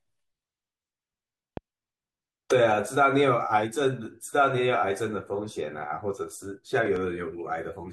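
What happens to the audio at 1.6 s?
At 1.57 to 1.59 s a single loud pop sits on top of the speech, peaking roughly 10 dB above the surrounding signal. The likely cause is an abrupt voltage step or pulse entering the chain, from a connector, a switch, static discharge or a driver glitch, which the downstream circuitry then shapes into a short transient. It is heard as one sharp pop, with the speech continuing underneath it.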